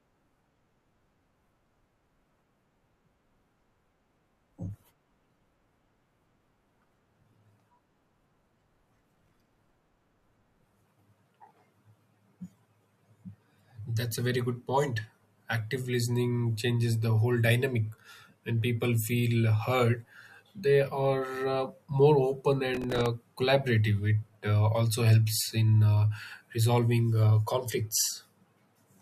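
Speech with two bursts of processor overload crackle: 8.98 to 9.74 s, and 22.74 to 23.06 s right after "uh more open". Each is gritty tearing from missed deadlines, about 30 and 15 respectively, on tiny buffers of about 3 ms, each gap filled with hard-edged scraps of stale audio.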